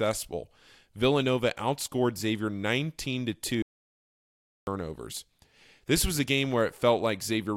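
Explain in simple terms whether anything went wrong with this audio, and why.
At 3.62 seconds the speech cuts off mid-flow, and it returns at 4.67 seconds. This is an audio dropout to silence. For about one second there is total silence, with no room sound at all. The input was likely lost briefly, so whatever was said then is gone.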